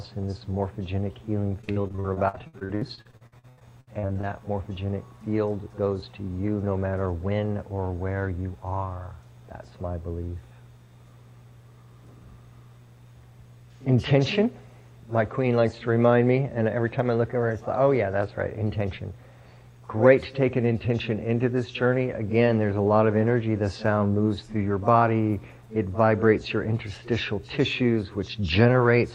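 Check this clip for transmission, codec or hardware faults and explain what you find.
Repeated packet loss (robotic sound) from 1.61 to 4.25 s: dozens of lost packets, gaps up to 79 ms, patched by extending prior sound. About 37% is concealed, giving choppy audio with pieces missing; spectrograms show smeared, repeated frames.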